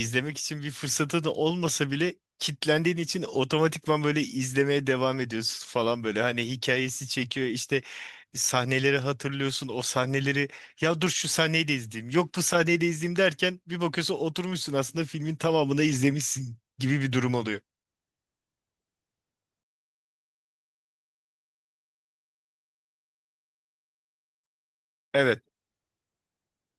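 Nothing is technically wrong with this speech recording.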